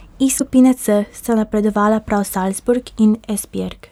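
Part of the compressed stream is damaged between 0.35 and 0.41 s, a case of damaged data in a compressed stream: the bytes there no longer form valid frames, so the decoder misreads them, loses sync and has to hunt for the next good frame header before it can resume. In the speech this comes through as a brief chirp, squawk, click or short hole lasting roughly 56 ms, cutting across the sound before normal decoding picks up again.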